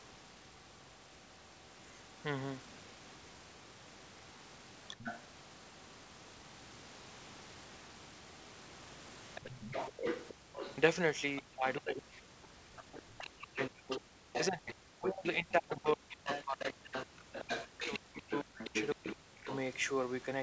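At 4.99 s a short scrap of the other side's voice leaking through appears, about 10 dB below the talker, most likely loudspeaker echo that the echo canceller failed to remove. Longer leaks follow from 9.35 to 11.42 s and from 12.79 to 15.27 s at only about 5 dB down, then from 16.27 to 19.87 s at about 10 dB down. On a spectrogram they show as a second, fainter set of speech harmonics layered under or between the talker's.

From 9.41 to 9.72 s the talker's own speech drops by roughly 20 dB for about 200 ms. This is speech suppressed in double talk. It is likely caused by the echo canceller confusing the near talker with the echo and attenuating both. A much longer stretch runs from 11.4 to 19.49 s, where about 5 seconds in total are pushed down, at worst by around 40 dB. The voice fades, loses its top end or breaks into pieces. In the waveform the envelope caves in, and on the spectrogram the talker's harmonics thin out or vanish in patches, with the upper band reaching only to 8 kHz anyway.

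The background is gated by the echo canceller from 10.34 to 10.53 s, dropping about 40 dB, and again from 14.06 to 14.2 s, dropping about 38 dB. In both places the canceller clamped the microphone while the loudspeaker played. The room noise, normally about 27 dB under the speech, briefly disappears into silence and then snaps back. On a spectrogram this appears as a near-black vertical gap in the noise floor.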